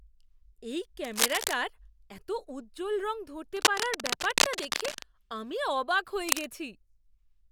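Cable scratch noise at 1.04–1.59 s before "এত উজ্জ্বল রং", 3.56–5.03 s before "আমি অবাক", and 6.27–6.44 s: uneven rustling bursts, likely from a worn connector shifting, roughly as loud as the speech or louder.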